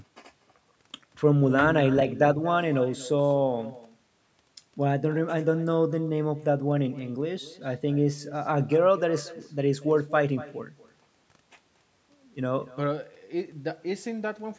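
From start to finish, each phrase of the speech is trailed by a fainter repeat arriving about a fifth of a second later and sitting roughly 18 dB below it. This is echo with no canceller: the far end played the call through a loudspeaker, its microphone captured it, and nothing subtracted it before it came back across the network. Room reverberation would blur into a smooth tail. This instead is a distinct, thin second copy, band-limited like the call path, which cuts off near 8 kHz.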